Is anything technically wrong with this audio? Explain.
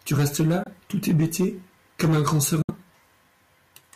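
Yes. The speech briefly cuts to silence twice: from 0.63 to 0.68 s, after "tu restes" and before "tout hébété comme un", and from 2.62 to 2.71 s, after "hébété comme un grand". The sound resumes slightly ahead, skipping about 21 ms and 64 ms of material. This is likely a Bluetooth dropout, where packets reached the headphones too late and were discarded.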